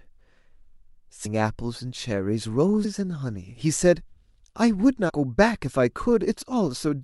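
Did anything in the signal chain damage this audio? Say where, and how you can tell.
Yes, at the codec stage: compressed frames skipped at 1.24 s, 2.84 s and 5.08 to 5.10 s. The speech jumps ahead roughly 70, 100 and 70 ms, multiples of a 26.1 ms frame. Overlapping frames smear each join into a soft blip, not a buffer dropout's silent gap or hard click.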